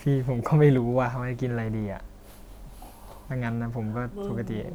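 Two converters running on separate clocks likely drift apart by around 200 parts per million, so the buffer between them slowly fills or drains until a handful of samples must be dropped or repeated. These clock drift buffer slips recur every 1.05 s, roughly four times between 0.78 s and 3.91 s. Each one lands as a brief, regular click in the speech, evenly spaced and unrelated to what is being said.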